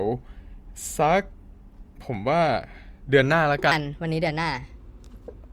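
Speech, with a section at the wrong speed from 3.71 s through to the end of the clip. Playback there runs about 1.28 times fast, so timing hurries and pitch rises together by roughly four semitones, most likely from that stretch being resampled or played against the wrong clock.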